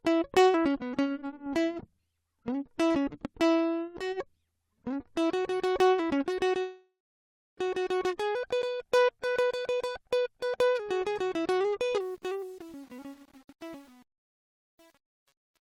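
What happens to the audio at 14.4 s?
The fade-out at the end of this music is processed by a gain stage that keeps too few bits and adds no dither: truncation distortion on a fade, running from 11.98 s to the end at 15.71 s. The grit suggests roughly 8-bit resolution. As the level drops toward the smallest step, the waveform collapses into coarse square steps. By 14.4 s, well past the worst onset at 12.2 s, the tail sounds gritty.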